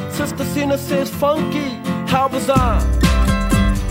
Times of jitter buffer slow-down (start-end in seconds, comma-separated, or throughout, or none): none